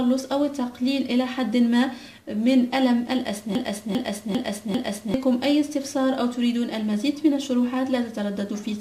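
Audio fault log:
3.55 to 5.14 s, broken-record loop: A fragment about 0.40 s long plays four times in a row, back to back. Each repeat is identical, so the sound stutters in a fixed rhythm instead of moving forward. Whatever should have been heard in that span never arrives. The likely cause is a stall in the player, encoder or stream, which kept resending the last piece it held until the flow resumed.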